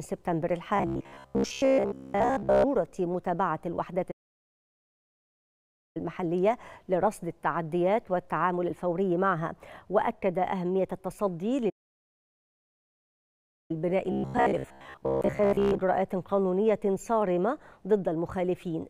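From 0.77 to 2.65 s the sound turns into a rigid, metallic buzz at 66.8 Hz. This is robotic sound from repeated short buffers, likely because new data arrived too seldom. A segment of about 15 ms was looped, so most of the real audio was skipped. On a spectrogram it shows as evenly spaced harmonics of 66.8 Hz, and the waveform roughly repeats one short cycle.

A playback stall follows from 4.11 to 5.97 s, likely from the player running out of data or its thread blocking. The output drops to silence mid-flow for 1.84 s, a flat line on the waveform and an empty vertical band on the spectrogram.

A second playback stall, likely from the same starvation, runs from 11.69 to 13.71 s. It leaves 2.0 s of the same flat, empty gap.

From 14.12 to 15.81 s the robotic sound from repeated short buffers returns, likely again from data arriving too seldom. It shows the same 66.8 Hz buzz and harmonic stripes, consistent with a buffer of about 15 ms being repeated.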